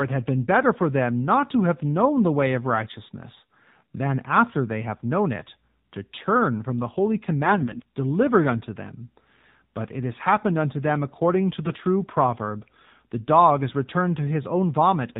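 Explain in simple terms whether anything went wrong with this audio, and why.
The whole recording passed through the AMR narrowband mobile codec, an old phone-call format. It removes everything above 4 kHz, so the speech sounds muffled, buzzy and robotic throughout.

AMR bit errors strike from 7.44 to 7.82 s and again from 11.63 to 11.79 s. Damaged data makes the voice briefly hoarse and gargly while its pitch and loudness stay roughly steady. That steadiness sets it apart from a dropout, where the sound would vanish.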